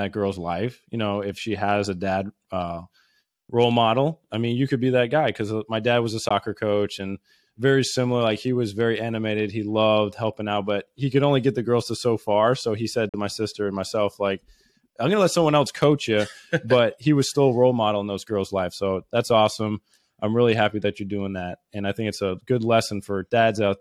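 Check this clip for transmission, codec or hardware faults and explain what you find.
Two brief gaps interrupt the speech, at 6.29 s and from 13.09 to 13.14 s, losing about 14.5 ms and 43.5 ms of sound. Each is a silence with abrupt or briefly faded edges, and the speech resumes further along as though it had kept playing. A Bluetooth dropout is the likely cause: late packets were discarded, the first gap fitting one packet and the second about three. Unlike a buffer stall, nothing is held back or repeated afterward.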